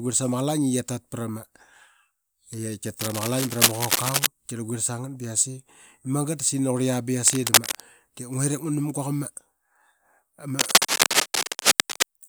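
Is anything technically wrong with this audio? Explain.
Yes. Three bursts of cable scratch noise, likely from a worn cable, plug or control being handled, break into the speech at 3.01 to 4.27 s, 7.26 to 7.83 s (just after "qurlia ba"), and 10.59 to 12.03 s. As the contact shifts, its resistance jumps about rapidly, injecting dense, irregular crackle. Each burst is a harsh scratching rustle: the first roughly as loud as the speech, the later two somewhat louder than it.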